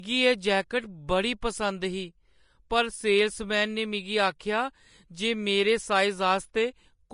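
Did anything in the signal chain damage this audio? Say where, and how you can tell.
Yes. Throughout, the speech is grainy and hissy with nothing above 10.5 kHz, pointing to a low bitrate near 33 kbps, likely Vorbis compression at the codec stage.

At 4.39 s, a brief hiss smears about 11 ms ahead of an attack. This is pre-echo: the codec spread its block quantisation noise into the quiet moment before the onset.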